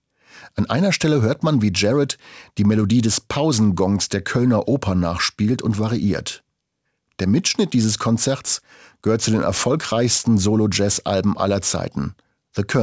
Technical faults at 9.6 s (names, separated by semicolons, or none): aliasing